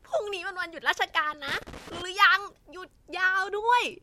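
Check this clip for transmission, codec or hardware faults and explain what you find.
There's a loose connector crackle from 1.48 to 2.02 s. A worn contact keeps making and breaking, chopping the speech into a scratchy, irregular burst of crackle.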